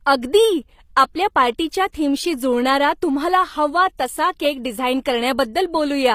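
A speech clip whose treble sounds synthetic throughout, most likely from HE-AAC compression at a low bitrate in the region of 24 kbps. The upper band is rebuilt from copies of lower bands rather than coded, so the s sounds come out gritty and metallic, and nothing reaches above 15.5 kHz. This differs from a plain low-pass or MP3 band limit, which would leave a dull top end. Here the treble stays bright but its harmonics don't line up with the body of the sound. At 1.92 to 1.94 s there is pre-echo, between "अगदी आपल्या पार्टीच्या" and "थीमशी जुळणारा तुम्हाला हवा". A brief hiss of about 20 ms arrives just ahead of a sharp onset, which sounds softened. The codec spread its quantisation noise across the transform block, into the quiet instant before the attack. Unlike a click or dropout, it is a smear of noise that leads the transient rather than a break in the sound.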